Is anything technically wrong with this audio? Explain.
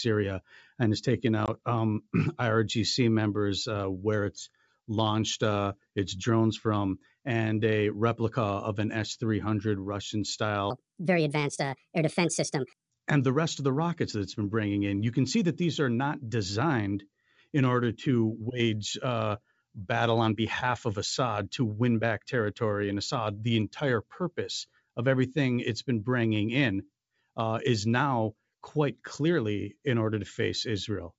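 Yes, there are two faults.

Packet loss on an ADPCM call at 1.46 to 1.49 s: about 20 ms of audio, which fits a couple of lost packets, was replaced by silence. The decoder's adaptive predictor and step size then drifted from the sender's, so the speech returns slightly distorted after the hard-edged gap, settling within some tens of milliseconds.

A section at the wrong speed from 10.70 to 12.90 s: this stretch plays 1.37 times too fast, likely because it was fitted to the wrong clock. Speed and pitch rise together, about five semitones, so the speech turns higher and more hurried, then snaps back to normal at 12.90 s. Around these faults, the G.722 wideband coding still carries speech cleanly up to 7 kHz.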